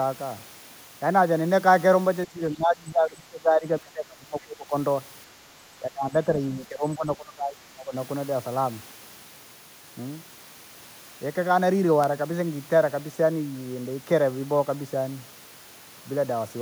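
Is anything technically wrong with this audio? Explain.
Yes. Speech suppressed in double talk, from 2.25 to 4.73 s and 5.8 to 7.94 s: the level drops in pieces, by up to about 20 dB. The likely cause is an echo canceller turning down its own talker along with the loudspeaker echo during overlapping talk. The waveform shows choppy dips.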